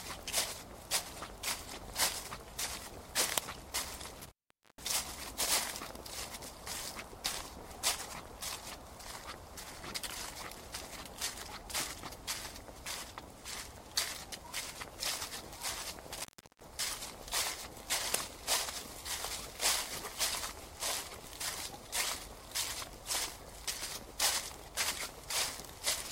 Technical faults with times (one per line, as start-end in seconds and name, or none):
4.18-4.83 intermittent contact
16.19-16.66 intermittent contact